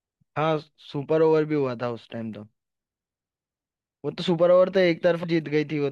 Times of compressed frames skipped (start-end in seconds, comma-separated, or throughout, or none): 5.23